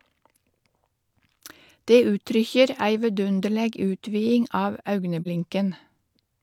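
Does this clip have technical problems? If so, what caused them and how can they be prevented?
Yes. At 5.22 to 5.27 s there is AAC frame loss with muting. A compressed frame never reached the decoder, so it zeroed that stretch of spectrum, and a gap of about 43 ms, which fits a single lost frame, opens in the speech. The overlapping transform windows fade the sound out and back in, so it is heard as a brief dip. Protecting the stream with error correction or retransmission, or having the decoder conceal lost frames by interpolation rather than muting, would prevent this gap.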